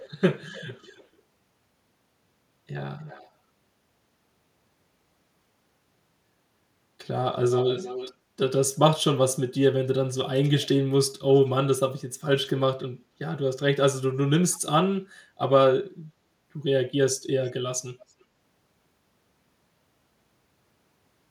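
A speech clip with echo leak in seven short bursts, at 0.0–0.1 s, 0.52–1.07 s, 3.02–3.31 s, 7.51–8.14 s, 14.51–14.59 s, 17.46–17.5 s and 18.09–18.13 s. A delayed copy of the speech trails it by about 0.30 s, drifting to 0.32 s. It is loudest, about 10 dB under the speech, near 7.5 s and about 40 dB under by 17–18 s. On a spectrogram, weaker duplicate harmonic patterns appear shifted right of the originals. This is likely a far-end echo canceller letting loudspeaker pickup through.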